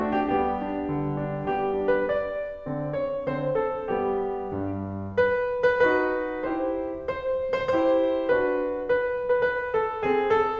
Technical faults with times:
none

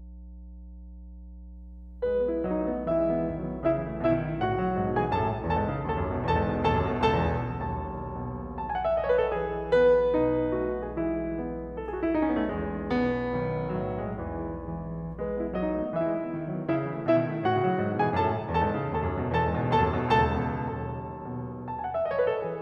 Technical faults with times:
0.00-15.83 mains hum

